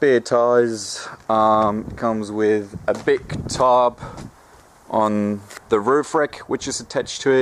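Nothing technical jumps out in this audio; it comes across as sound that's simply been captured and passed along without any trouble worth pointing to.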